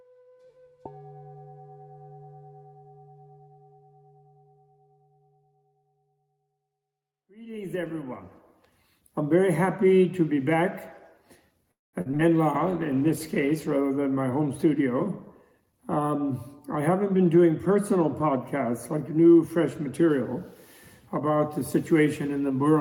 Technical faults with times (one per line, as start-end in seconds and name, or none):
11.71-11.95 call audio freeze
12.01-12.21 short concealed packet loss
12.56-13.79 call bitrate drop
15.35-15.98 jitter buffer speed-up
21.77-22.74 jitter buffer speed-up